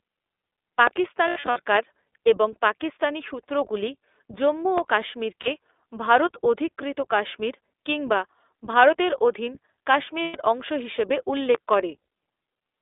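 The speech is band-limited by the iLBC codec from start to end. A spectrogram shows energy confined to about 300 Hz to 3.6 kHz with a bare top. The voice has a slightly rough, synthetic edge, which fits 20 ms frames at 15.2 kbps.

Lost iLBC frames come first at 1.28 to 1.58 s. About 200 ms of audio is missing across 280 ms, in runs of up to about 70 ms. Each gap is filled with a held, buzzy repeat of the last pitch cycle. On a spectrogram these show as smeared, flat harmonic bands.

A short 40 ms loss follows at 5.42 s, between "পাকিস্তানি সূত্রগুলি জম্মু ও" and "ভারত অধিকৃত কাশ্মীর কিংবা". A 120 ms loss at 10.22 to 10.36 s comes just before "অংশ হিসাবে". In each case the speech recovers almost at once.

A loud pop, in fact two pops in quick succession, lands at 11.55 to 11.76 s, just after "অংশ হিসাবে". They peak about 15 dB above the speech, which continues beneath them. The waveform shows sharp spikes, and the spectrogram shows full-band vertical lines, likely from a voltage step such as static or a switch.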